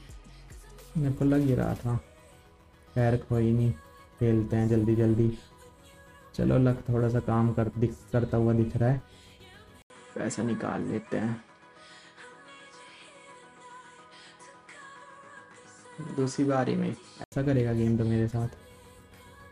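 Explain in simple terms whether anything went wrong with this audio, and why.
Partway through, the recording system most likely switched its input to a poorer device, such as another microphone or a headset's call mode. At 9.82 seconds there is a gap of about 80 milliseconds, and from then until 17.32 seconds nothing above roughly 10.5 kHz comes through, so the sound loses its crisp top end. A new, low background noise also sits underneath, while the loudness stays about the same.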